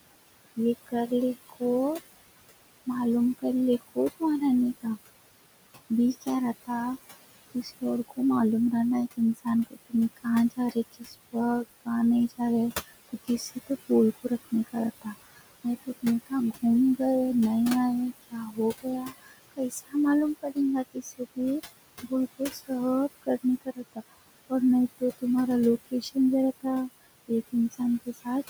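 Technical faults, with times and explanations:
Throughout, noise suppressor artifacts: the room noise is pulled down about 18 dB between words and swells back beneath them.
0.56–1.61 s, 2.86–4.85 s, 5.9–8.18 s, 9.17–17.0 s and 18.3–28.27 s, speech cut by the noise suppressor: soft consonants and endings, mistaken for noise, sink by about 15 to 21 dB and sound swallowed, not fully lost as in a dropout.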